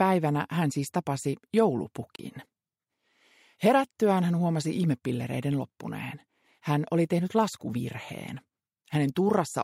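At 2.16 s the audio drops out abruptly and returns at about 2.20 s, a digital broadcast dropout. The receiver evidently stopped getting usable data, either because the signal momentarily failed or because a frame did not pass its error check, so it muted its output until valid frames resumed. The gap is short, with about 32 ms of material missing, which fits a single lost frame. It sounds like a brief hard hole in the sound, and the lost material is never recovered.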